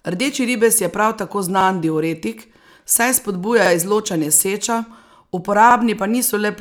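Overlapping chunks at 1.61 s (between "ribez je prav tako" and "diuretik saj"), 3.66 s and 5.71 s: each 2.0 s chunk replays the previous 50 ms, giving regular stutters.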